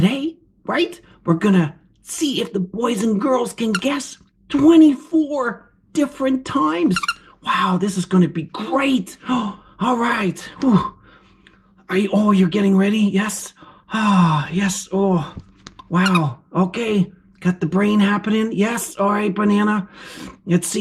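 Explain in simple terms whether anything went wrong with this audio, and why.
Nothing went wrong here: every part of the recording checks out, with no faults found anywhere.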